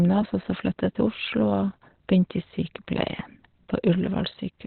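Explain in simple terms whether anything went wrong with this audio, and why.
Yes, something went wrong, and it lasts the whole clip. The speech sounds muffled and hoarse, with nothing above about 4.2 kHz, so the crisp upper part of the sound is missing from start to finish. The likely cause is heavy Opus compression at a very low data rate. To save space, the encoder switched to its speech mode and kept only a narrow band of frequencies, which leaves this dull, rough quality.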